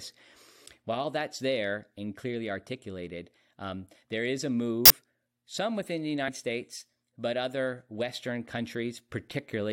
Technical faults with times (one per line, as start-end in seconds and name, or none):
4.85-4.90 compressed frames skipped
6.27 compressed frames skipped